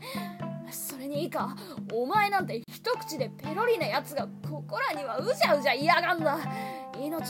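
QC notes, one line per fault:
2.64–2.68 s, gap at a join of encoded pieces: the sound breaks off in a gap of about 40 ms, then resumes exactly where it left off. The edges of the gap are smeared by the codec, so the fully silent part is shorter. This points to two separately encoded pieces joined without trimming. The encoder's start-up delay and the padding of the last frame both stayed in the file. Together they leave a short hole in otherwise continuous sound.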